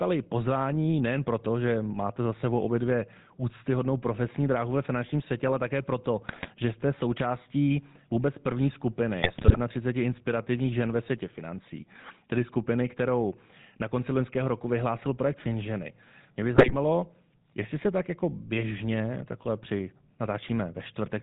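From start to finish the speech carries plainly audible GSM full-rate codec damage. The voice is rebuilt from a vocal-tract model. That model is driven by sparse, evenly spaced pulses, so fine detail in the excitation is lost. Nothing above 4 kHz survives. The result is a buzzy, gravelly roughness over every syllable. The narrow, coarse sound fits the old 13 kbps GSM full-rate coder.

GSM bit errors break in three times: 6.28 to 6.49 s, 9.22 to 9.58 s, and 16.54 to 16.75 s. Corrupted bits reach the decoder and spoil the filter, pitch or gain values for individual frames. The spectrum bends and the level jumps. Each burst is heard as squawks, pops and gargling. The one near 9.2 s is longest. The one near 16.5 s has the heaviest error rate.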